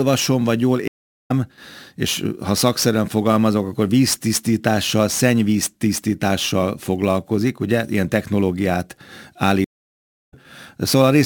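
Sample clock jitter runs throughout as a hiss-like roughness, roughly 20 dB under the sound, which swells on loud, bright passages and vanishes in silence, unlike steady background noise. Two stream reconnects cut the audio at 0.88–1.31 s and 9.64–10.34 s, with silences of 0.41 s and 0.65 s. Each time the sound resumes about 0.4 s further on, skipping material rather than just pausing as a simple dropout would.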